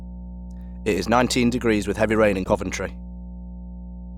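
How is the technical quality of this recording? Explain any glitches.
Two problems here. A steady 60 Hz mains hum runs the whole way through, sitting roughly 15 dB under the speech, probably a ground loop or nearby transformer leaking the power line into the signal. Then from 2.44 to 2.51 s, right after "with heavy rain in", there's a brief dropout with about 15 ms of silence, likely a Bluetooth stall where interference delayed packets and the headphone buffer briefly ran empty.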